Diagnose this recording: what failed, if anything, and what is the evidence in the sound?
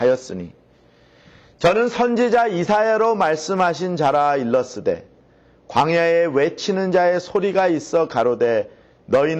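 An adaptive stream starting at a low bitrate, a fault of the network and playback stage. Until 2.0 s the treble is thin and synthetic, which points to low-rate HE-AAC. Then quality steps up with no gap, to content reaching 14.9 kHz. That seamless jump rules out packet loss.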